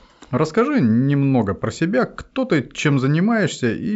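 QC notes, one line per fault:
No fault to note in this clip.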